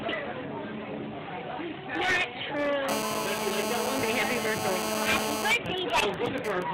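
From 2.89 to 5.51 s there's GSM phone buzz: a nearby 2G phone mid-call, its 217 Hz radio bursts rectified into a steady, raspy, harmonic-heavy drone only about 2 dB under the signal. Then from 5.51 to 6.63 s it drops to GSM signalling bursts, even ticks with a longer 217 Hz buzz twice a second, roughly 10 dB down, as the phone goes quiet on its end.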